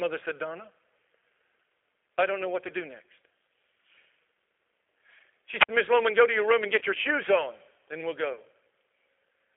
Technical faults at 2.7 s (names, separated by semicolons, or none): G.729 codec; VoIP packet loss concealed by the speech codec